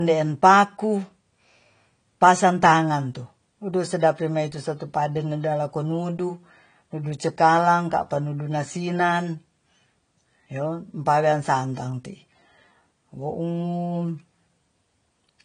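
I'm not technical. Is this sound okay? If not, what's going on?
No. Throughout, this speech sounds dull, with nothing above 9.8 kHz. That is likely low-bitrate audio saved at a high bitrate: a large file that still can't restore the detail the first compression removed.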